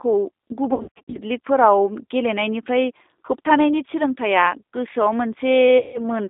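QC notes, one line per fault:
Throughout: G.729 codec. The sound is limited to a line band of about 250 Hz to 3.7 kHz. It has a rough, synthetic edge, which fits an 8 kbit/s G.729A coder. That coder rebuilds speech from a filter, a pitch predictor and a few pulses per frame. The damage is plainly audible.
0.74–1.18 s and 5.78–6.01 s: VoIP packet loss concealed by the speech codec. In the first span, 300 ms goes missing in scattered gaps across 400 ms, the longest being 60 ms. The second span loses 160 ms. Both point to 20 ms packets. The decoder stretches its last pitch and filter into a buzzy tone or a coloured noise that fades. Because each frame builds on the previous one, the sound stays weak briefly after packets return.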